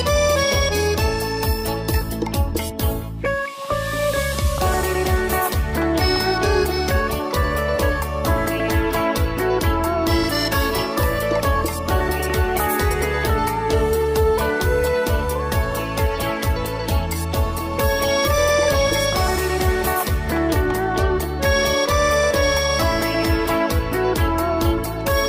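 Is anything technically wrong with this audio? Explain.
No, nothing in this audio points to a technical problem with the signal.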